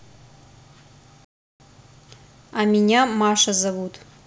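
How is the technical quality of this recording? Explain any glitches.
The speech has one clear glitch, a playback stall from 1.25 to 1.6 s. The audio cuts to silence in mid-flow for about 354 ms, then resumes. The likely cause is the player running short of data or having its output thread blocked, so nothing reached the output until it recovered. It sounds like an abrupt dropout rather than a fade, a hard gap of roughly a third of a second interrupting the speech.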